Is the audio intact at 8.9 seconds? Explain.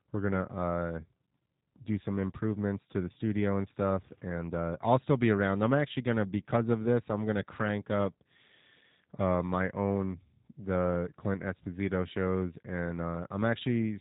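No, the G.729 codec damage runs through the whole clip, including 8.9 s: speech rebuilt from filter, pitch and pulse models sounds rough and synthetic, not merely band-limited, above 3.8 kHz.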